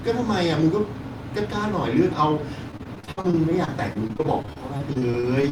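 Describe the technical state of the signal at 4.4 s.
Repeated packet loss (robotic sound) affects 4.4 s, inside a run from 2.71 s to the end of the clip at 5.51 s. Packets keep arriving late or not at all, and each hole is covered by stretching the last received sound before the next dropout follows. Across 27 gaps, the longest about 58 ms, about 557 ms is patched and about 460 ms simply missing, so the speech sounds choppy, with pieces absent.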